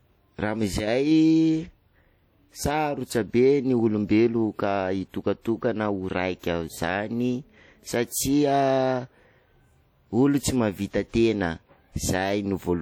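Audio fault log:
throughout, WMA compression: the speech carries a ringing, washy smear, with a hiss that swells and fades along with the voice, and the damage is plainly audible. This is likely transform coding in the style of WMA version 1 at a low bitrate, in line with about 48 kbps. Long transform blocks spread the quantisation noise over tens of milliseconds around each sound, and weak spectral lines are dropped, even though content still reaches about 20.1 kHz.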